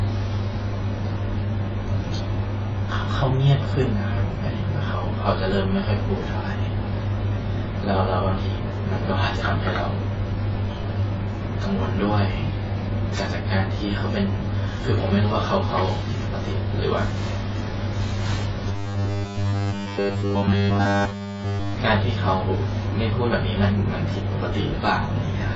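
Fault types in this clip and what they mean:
AAC compression: Heavy smearing and a hard ceiling at 7.6 kHz, likely from AAC at a low rate near 16 kbps; the spectrogram shows a flat cut-off.
Robotic sound from repeated short buffers: From 18.68 to 21.74 s, 10 ms slices repeat throughout, giving a 100 Hz buzz; the waveform shows identical cycles, likely repeated buffers.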